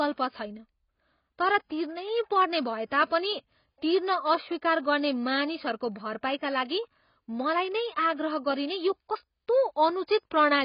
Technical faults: AAC compression

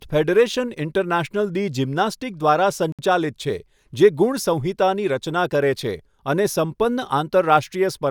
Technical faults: Bluetooth stall

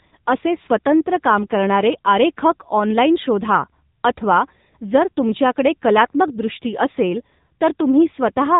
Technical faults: AMR narrowband mobile codec

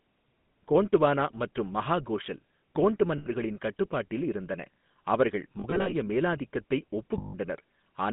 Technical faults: GSM full-rate codec; lost GSM frames

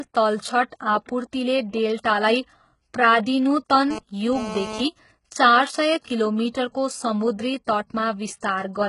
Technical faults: HE-AAC compression; GSM phone buzz

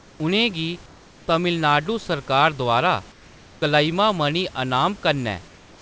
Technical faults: comfort noise in place of the background

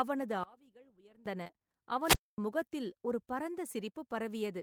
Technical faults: one channel inverted; short concealed packet loss; wireless microphone squelch dropout

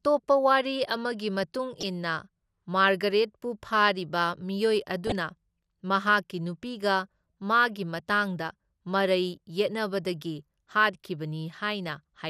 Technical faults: MP2 compression; DAB burbling

